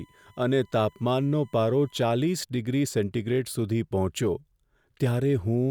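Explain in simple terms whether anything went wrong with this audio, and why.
USB whine runs from the very start to 2.0 s: a thin, steady, high-pitched tone sitting at 1 kHz, faint behind the speech. A USB connection works in regular bursts, a thousand times a second, and each burst pulls a little electrical current. Some of that pulsing leaks through the power or ground wiring into the audio, where it becomes a fixed 1 kHz note. After 2.0 s the tone is gone.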